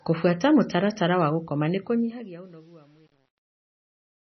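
Throughout, the speech sounds watery and swirly, with nothing above 6 kHz and metallic chirps on s sounds. This is likely MP3 compression at a very low bitrate, around 24 kbps. Unlike plain low-pass filtering, the damage flickers from frame to frame rather than simply dulling the sound.

From 1.70 s to 4.24 s, as the fade-out drops the level, truncation distortion appears. The fade keeps too few bits and adds no dither, which fits a resolution of about 9 bits. It is worst from 2.2 s to 4.24 s, where the quiet tail turns gritty. Codec swirl stays the same at any level, but this grit worsens as the level falls.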